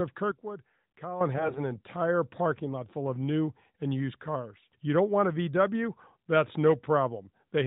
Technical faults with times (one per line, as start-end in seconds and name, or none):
0.31-1.21 sudden gain jump
1.36-1.60 AMR bit errors